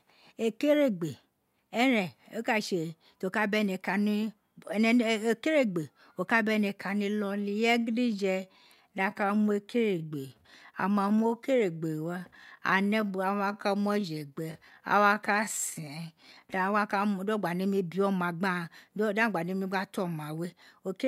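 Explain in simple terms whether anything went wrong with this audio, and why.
Between 7.00 and 16.70 s the speech abruptly slows to about 0.72 times its normal pace, yet the pitch stays the same, then snaps back to normal. That is a time-stretched section. It was likely produced by software lengthening the audio to fill a set duration, repeating short slices of sound to hold the pitch steady. That is why the slowed stretch drags.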